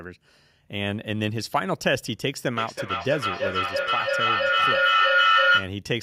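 A speech clip in which, from 2.56 s to 5.76 s, each word comes back at intervals of about a third of a second, thinner and more metallic with every pass. The repeats build rather than fade, peaking at about 7 dB above the speech itself. This is feedback echo between two devices: a second device in the same room replays this microphone's signal, the microphone captures it again, and neither echo canceller removes the other device's playback.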